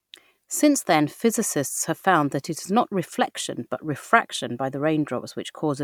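Nothing in this bit of speech points to a technical fault; there's no moment where the audio slips, breaks up or goes wrong.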